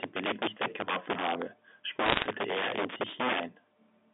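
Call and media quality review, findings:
Integer overflow, throughout: violent cracks on loud speech peaks, sharper than clipping. A gain or mixing stage pushes the signal about 14 dB past full scale, and a small share of samples wrap to the opposite sign instead of being clamped.

Bit errors on the digital phone line, 2.06 to 2.26 s: a burst of sharp ticks and crackle over intact speech, inside the same 200 Hz to 3.6 kHz G.711 band. Flipped sign and high bits in mu-law samples, error rate around one percent, spread fits roughly ten frames.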